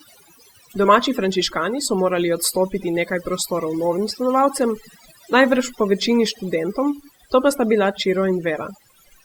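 Speech, with overdone noise removal throughout: the background drops and breaks up into twinkling specks while quiet parts of the voice vanish, unlike the steady muffling of low-bitrate compression.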